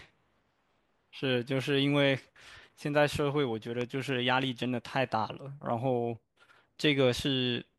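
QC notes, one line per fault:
3.81–3.83 s, loud pop: a single sharp pop stands out roughly 10 dB above the speech, which carries on unbroken beneath it. A sudden voltage spike, likely from a plug, switch or static discharge, was added to the signal and shaped by the downstream circuitry.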